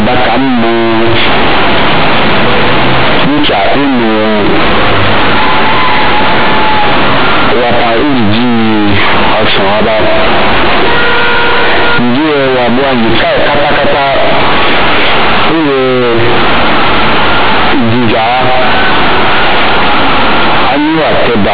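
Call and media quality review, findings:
Companded audio read as linear, full clip. Symptom: very loud, buzzy distortion; strong noise filling speech pauses. Probable component: playback/decode stage passing mu-law bytes straight through as linear 8-bit samples, expansion skipped. Mechanism: each sign change swings output across about half its range, so quiet passages come out as large as loud ones and the waveform is bent out of shape. Underlying G.711 mu-law coding at 8 kHz working; 4 kHz band limit still heard beneath the distortion.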